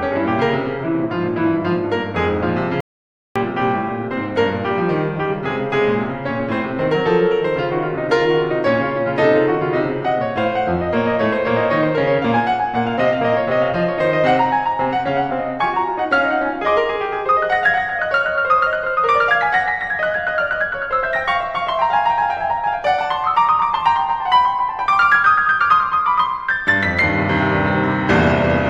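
An audio dropout to silence runs from 2.80 to 3.36 s, cutting the music off mid-flow for about 0.55 s. The gap is dead silence with no room tone, most likely because the input was briefly lost while recording continued, so the music from that stretch is simply missing.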